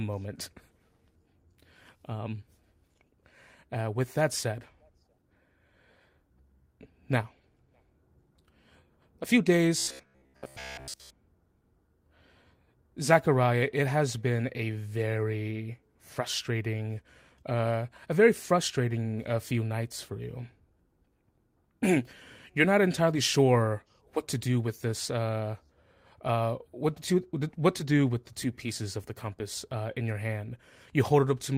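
A speech clip with robotic sound from repeated short buffers from 9.78 to 11.10 s, right after "a few". The voice becomes a rigid metallic buzz at 66.8 Hz, which fits a roughly 15 ms slice being repeated for most of that stretch, likely because new audio arrived too seldom.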